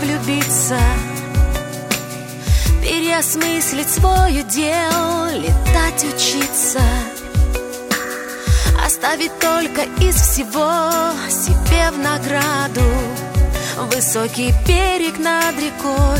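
Nothing technically wrong turns up anywhere in this audio, so there are no fault times or causes to point to.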